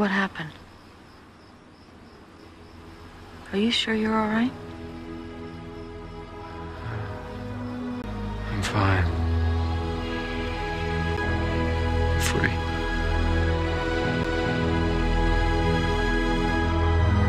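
Three CD skips occur: from 8.02 to 8.04 s, then at 11.17 s and 14.24 s. Each time the laser loses its track on the disc's spiral and lands on another turn, so the player briefly mutes, for roughly 20 ms in the first case and about 10 ms in the others, then resumes from a displaced position. Each skip sounds like a short tick or gap followed by an abrupt discontinuity where the audio picks up somewhere else.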